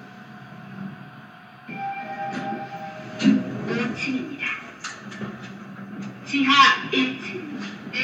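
Nothing here gets in the way of these sounds; there's no technical fault to report anywhere in the clip.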